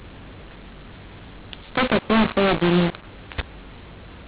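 From start to finish the speech carries a mu-law and A-law mix-up: telephone audio coded with the A-law companding curve has been expanded using the mu-law curve, so every 8-bit code maps to the wrong level. Loud and soft samples are scrambled, making the speech harsh and gritty, and the pauses fill with hiss instead of falling silent. The waveform looks jagged and never settles to zero, and a spectrogram shows broadband noise across the whole 4 kHz telephone band.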